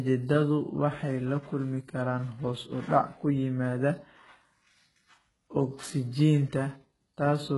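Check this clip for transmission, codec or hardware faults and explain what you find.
One codec fault runs through the whole speech clip. The treble sounds gritty and metallic, with lispy s sounds and nothing above 11.5 kHz. This is likely HE-AAC compression at a very low bitrate, near 12 kbps, with spectral band replication rebuilding the upper band from copied lower bands.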